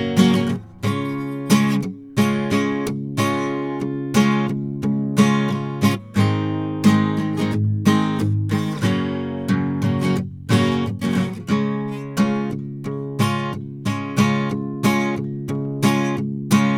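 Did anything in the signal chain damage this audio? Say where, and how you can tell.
No, no signal-chain damage heard.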